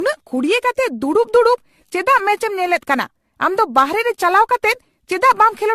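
From start to finish the speech carries generation loss, most likely from being run through a lossy encoder again and again, which fits AAC-LC at about 64 kbit/s applied around seven times. Nothing remains above 14.1 kHz, and each new pass requantises on a shifted frame grid, so the artefacts stack. What separates it from a single low-bitrate encode is the degree: the swirl, the hollow phasey tone and the smeared consonant attacks are heavier than that cut-off and bitrate would give on their own.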